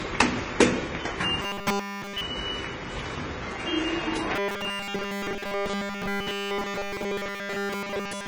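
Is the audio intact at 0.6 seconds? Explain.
No. At 0.6 s, as throughout, two different smeary, warbly artefact textures overlap. That layering, rather than one codec's signature, points to likely transcoding between lossy codecs, a very low-rate HE-AAC pass re-encoded as low-rate MP3.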